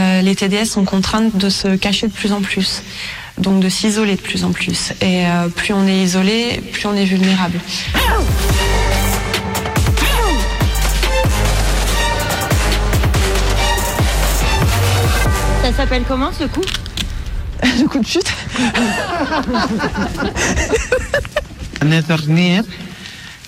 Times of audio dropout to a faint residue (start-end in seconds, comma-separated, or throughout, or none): none